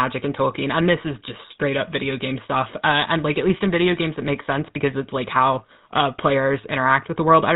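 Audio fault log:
throughout, GSM full-rate codec: the speech turns buzzy and gravelly with nothing above 4 kHz, a sign of pulse-excited vocal-tract coding at 13 kbps.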